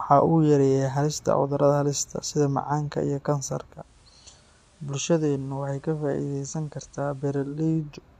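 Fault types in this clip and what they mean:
Digital radio blending to analogue: speech fades in 328 ms to hissy FM, about 4 dB quieter, then returns, unlike a fixed filter.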